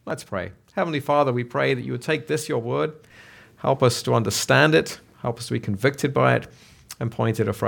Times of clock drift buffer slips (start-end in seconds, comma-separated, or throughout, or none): 0.10-6.51